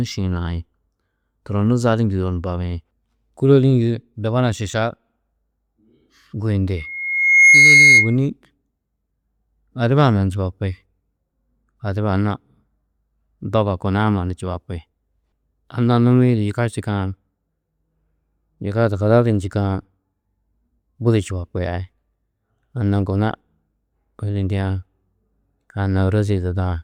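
From 6.77 to 8.16 s, loudspeaker feedback squeal: the microphone's loop through the loudspeaker runs away at 2.2 kHz, swelling within a second into a piercing tone well above the speech.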